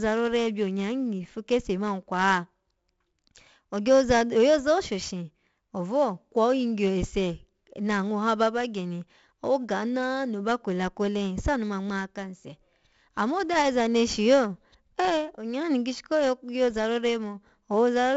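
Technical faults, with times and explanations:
Throughout, 4-bit ADPCM compression. Each sample is coded as a small 4-bit step from a predicted value, with a step size that adapts as the speech moves. The coarse steps leave broadband noise riding some 20 to 30 dB under the signal. It rises and falls with the level, so loud syllables carry a gritty hiss. Sharp onsets distort where the step cannot grow fast enough. The damage is heavy. Nothing reaches above 7.7 kHz, which dulls the sound and fits a stream of about 64 kbps.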